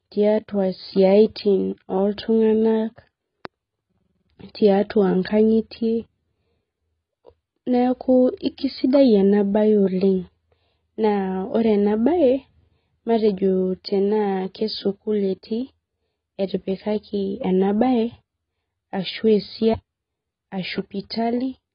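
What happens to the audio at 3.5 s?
A sudden voltage pulse, likely from a plug, a switch, static or a driver glitch, enters the signal path between 3.45 and 3.47 s. It adds a single loud pop on top of the speech, peaking at around 5 dB above the surrounding signal. The pop lasts only about 20 ms, and the speech carries on underneath it without a break, so it sounds like a sharp click laid over the audio.

Throughout that moment, and the rest of the clip, the audio has passed through heavy lossy coding that is likely AAC-LC at a low bitrate. The sound suggests a rate of around 16 kbps. The encoder has discarded everything above 5.1 kHz and quantised what remains coarsely. As a result, the speech around the pop sounds dull and smeared, with a warbling, fizzy texture on sibilants and sustained sounds.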